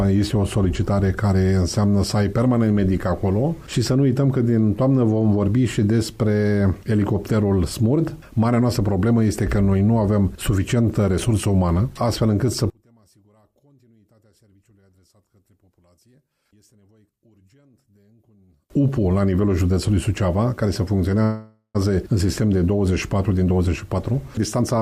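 From 12.7 to 18.7 s, one channel inverted is the likely cause: one side's polarity seems reversed, so summed to mono the shared content cancels, dropping the level by about 38 dB. From 21.23 to 21.77 s, a call audio freeze likely occurred: delayed packets emptied the jitter buffer, and the last sound was stretched into a fading fill ending in about 100 ms of silence before the audio resumed intact. From 23.30 to 24.80 s, a jitter buffer speed-up trims short pitch-period pieces, around a third of a second in total, so the sound runs at 116% speed without a pitch change.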